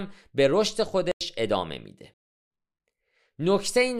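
At 1.12 s the speech cuts to a block of digital silence lasting about 93 ms, and from 2.14 s to 2.51 s a second, longer hole of about 370 ms follows. The output was replaced by zeros, which fits unfilled buffers of 4,096 and 16,384 samples. The sound cuts out and back with no fade, and the floor drops to silence. That abrupt, unfaded switch separates it from a natural pause or a gated dropout, which keep some room tone or ramp smoothly.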